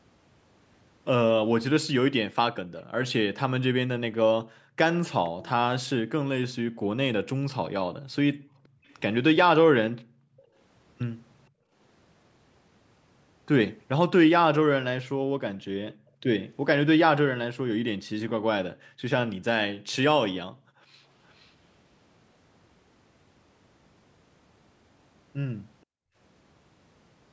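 From 4.44 to 4.77 s the echo canceller clamps the microphone while the far end plays, gating the background. The room sound drops by up to about 40 dB for roughly a third of a second, then returns. At 5.27 to 5.49 s a faint copy of the speech arrives 474 ms late, well below the main level. This is likely an echo leak, with loudspeaker sound slipping past the canceller and being sent back. The same gating recurs between 6.7 and 11.74 s, cutting the background in and out for about a second and a half in total. Inside that stretch, at 8.85 to 8.95 s, a fainter scrap of the 474 ms echo returns. Further dips come at 15.2 to 16.23 s, briefly, and at 18.07 to 21.07 s, for about a second altogether. At 21.29 to 21.5 s a very faint echo follows at the same 474 ms delay. A last brief gating dip comes at 25.85 to 26.16 s.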